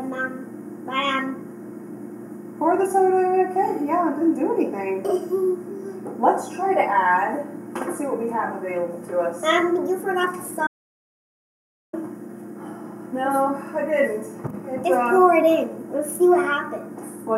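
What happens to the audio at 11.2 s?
At 11.2 s the sound is in the middle of an audio dropout to silence. It runs from 10.67 s to 11.93 s, about 1.26 s. The audio cuts out into silence with no room tone, then resumes. The input was likely lost briefly while recording continued.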